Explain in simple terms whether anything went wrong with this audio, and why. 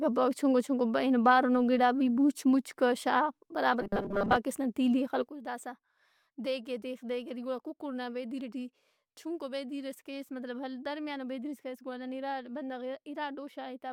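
Two things go wrong here.

From 3.81 to 4.37 s there is robotic sound from repeated short buffers, just before "نا تیلی ئے". The speech turns into a stiff, metallic buzz at about 200 Hz. The likely cause is that new audio arrived too slowly. So the software kept replaying tiny 5 ms scraps. Most of the real sound in that stretch was skipped.

At 5.28 s, right after "نا تیلی ئے", there is a sudden gain jump. The level drops sharply in an instant, with no fade. The speech and the background noise both get much quieter together. They stay that way to the end. A volume setting was likely changed abruptly.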